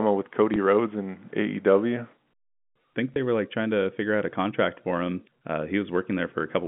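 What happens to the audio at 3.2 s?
Just before that point, from 3.14 to 3.16 s, there is packet loss with the last packet repeated. About 20 ms of audio went missing, which fits a single lost 20 ms packet. The receiver filled the gap by playing the previous packet again until fresh audio arrived. A lone repeat like this is heard as a small blip in the speech. The G.711 telephone band, roughly 150 Hz to 3.5 kHz, carries on around it.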